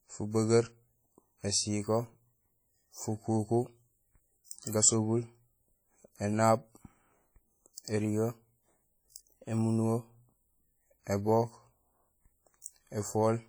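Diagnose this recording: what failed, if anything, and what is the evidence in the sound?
The codec stage is at fault. The whole speech track has a ringing, washy texture with hiss that swells and fades with the voice, likely from heavy WMA compression at a rate that fits about 32 kbps. A spectrogram shows smeared, patchy harmonics and weak detail zeroed, with content reaching about 20.1 kHz.

The same codec causes pre-echo at 12.62 to 12.66 s. A soft hiss leads a sharp attack by about 42 ms because the transform block spread its quantisation noise back into the quiet moment before it. On the waveform, low-level noise precedes the onset. On a spectrogram, a faint broadband smear sits just ahead of it.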